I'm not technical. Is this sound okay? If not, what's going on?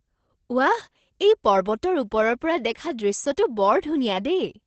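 No. For the whole clip, the speech carries Opus voice compression applied heavily. The encoder keeps nothing above about 8.7 kHz and rebuilds the voice from a rough model, so it sounds muffled, hoarse and faintly robotic from start to finish.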